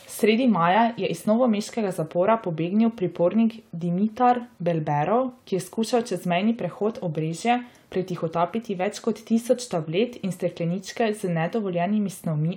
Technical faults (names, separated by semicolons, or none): none